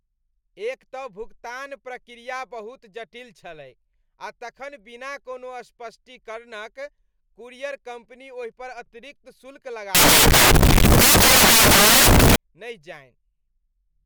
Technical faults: samples built from the wrong bytes

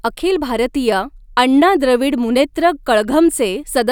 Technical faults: none

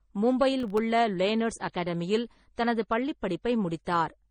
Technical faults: transcoding between lossy codecs; processor overload crackle

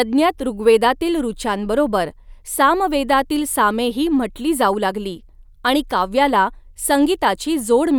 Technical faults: none

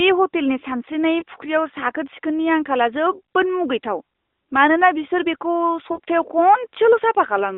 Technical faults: lost AMR speech frames

